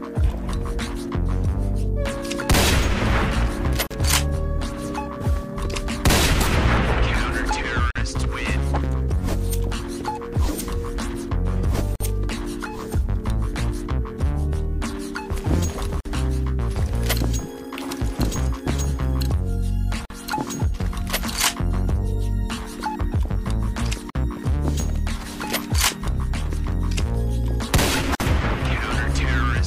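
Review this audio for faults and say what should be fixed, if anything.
A gap at a join of encoded pieces recurs every 4 s, at 3.87 s (38 ms), then 7.91, 11.96, 16.00, 20.05, 24.10 and 28.15 s (49 ms each). Each separately encoded piece carries its start delay and end padding, leaving brief silences. Unlike random dropouts, these are evenly spaced and the sound resumes exactly where it stopped. Trim encoder delay and padding, or encode as one continuous stream.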